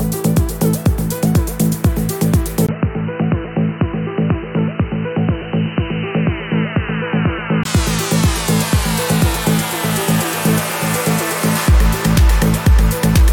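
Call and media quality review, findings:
Input switched to a poorer device, 2.67–7.65 s. Sound turns dull and boxy, with nothing above 3 kHz. Brief gap of about 20 ms at the switch. Level drops a few dB and a different noise floor appears, well below the signal. Likely cause: capture moved mid-recording to a narrower-band microphone or a headset call profile, then returned to the original input.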